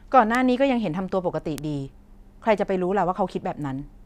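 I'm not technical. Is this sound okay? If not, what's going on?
No. A single bit flipped somewhere in the digital chain, in memory or on a cable carrying the data, so a couple of sample values suddenly jumped by a large amount and then snapped back. That is a bit error spike. In this speech clip it happens three times, at 0.35, 1.58 and 2.58 seconds, each heard as one sharp, hard tick that has nothing to do with the speech around it. The last tick is noticeably fainter than the first two.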